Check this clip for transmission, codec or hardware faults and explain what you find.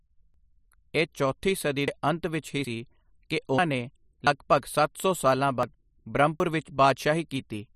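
Seven dropped buffers (overrun) break this speech, at 0.34, 1.88, 2.65, 3.58, 4.27, 5.63 and 6.40 s. The likely cause is the capture program failing to read samples before the hardware overwrote them. Roughly a tenth of a second vanishes each time, somewhat more at 3.58 s, and the edges are joined without a gap. Each drop sounds like a jump forward. The one at 1.88 s falls between "ਇਹ ਚੌਥੀ ਸਦੀ" and "ਦੇ ਅੰਤ ਵਿੱਚ ਹੀ", and the one at 4.27 s comes just before "ਸੱਤ ਸੌ ਸਾਲਾਂ".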